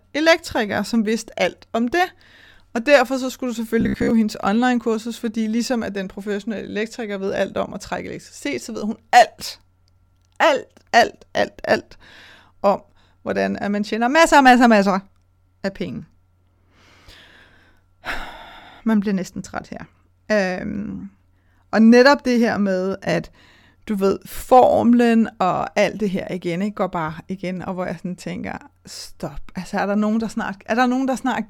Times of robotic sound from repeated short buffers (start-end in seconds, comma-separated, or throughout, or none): 3.81-4.11